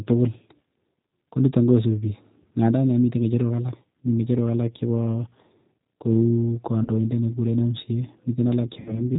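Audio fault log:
throughout: G.729 codec. The whole clip has that slightly rough, synthetic edge, and nothing comes through above 4 kHz, so it sounds dull and boxy. The decoder rebuilds the speech from a vocal tract filter, a pitch predictor and a handful of pulses per frame, rather than sending the waveform itself. The damage is plainly audible, and the sound fits an 8 kbit/s G.729A stream.
6.83–6.89 s and 8.80–9.06 s: VoIP packet loss concealed by the speech codec. At both points the speech smears into a buzzy tone or coloured noise that fades. The decoder is stretching its last pitch and filter settings and turning the gain down to cover the missing audio. The first gap fits a single lost 20 ms packet. The second is longer and fits about 60 ms lost across three packets. It stays weak and distorted for a while after the audio returns, because each frame builds on the damaged one before it.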